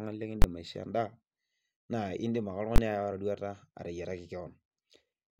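Invalid numbers at full scale strike twice in this speech, from 0.42 to 0.44 s and again from 2.76 to 2.78 s. In each 20 ms block a calculation returned infinite or undefined values, which the output clamped to the largest positive or negative sample. The waveform sits pinned at one extreme value, far beyond the speech peaks, for that instant, and because the block is so short it comes across as a single sharp, very loud bang.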